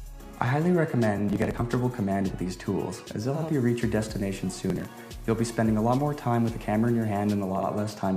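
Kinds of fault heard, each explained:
Processor overload crackle: at 1.18–1.61 s and 4.70–4.88 s, runs of short buffers, around 10 ms each, miss their deadlines and are skipped, giving gritty crackle.
Digital radio blending to analogue: from 3.19 to 7.81 s, the receiver cross-fades over 444 ms to the FM broadcast, adding hiss around 35 dB below the signal without changing level.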